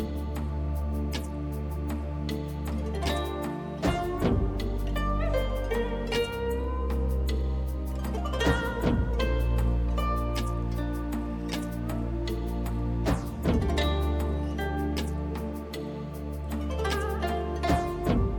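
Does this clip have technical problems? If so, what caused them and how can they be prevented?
No, nothing here needs fixing, so there's no cause to trace and nothing to guard against.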